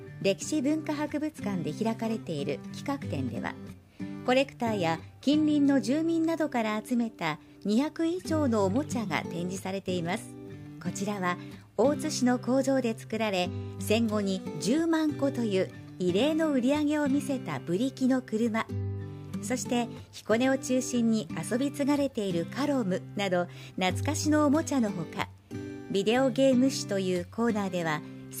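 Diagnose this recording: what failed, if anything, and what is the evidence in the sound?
Clock slip clicks run from 0.42 s to 28.13 s as faint, evenly spaced ticks about every half second. This is a converter-clocking fault, likely two unsynchronised devices drifting a few tens of ppm apart, so each slip drops or repeats one sample.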